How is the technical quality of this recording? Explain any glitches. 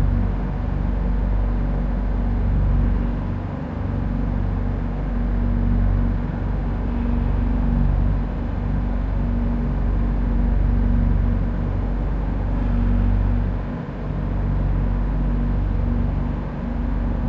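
Nothing technical gets in the way here; the recording holds together without any glitches worth pointing out.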